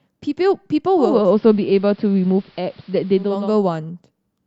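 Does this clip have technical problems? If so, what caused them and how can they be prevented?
Yes. Digital radio blending to analogue occurs from 0.90 s to 3.58 s. The hybrid receiver lost its digital stream and cross-faded over about 454 ms to the station's AM broadcast. Hiss rises to roughly 35 dB below the signal, and the level shifts by about 2 dB. At 3.58 s it blends back to digital. Improving reception with a better-sited antenna, or capturing from a wired or streamed digital feed, prevents the fallback.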